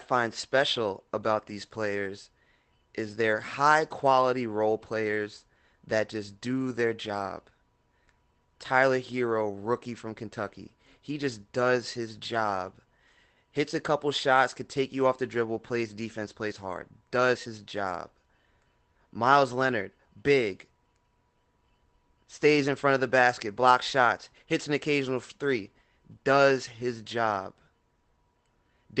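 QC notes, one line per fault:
24.05–24.11 s, lost packet rebuilt from error correction: between "of the basket blocks" and "hits an occasional three", audio was lost in transit. The decoder filled about 40 ms from low-bitrate copies carried in later packets, which fits two lost packets, so there is no gap, just a brief rougher, noisier patch.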